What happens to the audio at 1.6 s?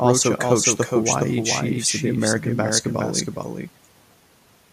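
At 1.6 s the speech is heard twice, as it is throughout the clip. This is a doubled audio track. A second copy trails the original by about 400 ms and sits roughly 5 dB lower, with no decay or room colour. It is likely a second capture through a slower path.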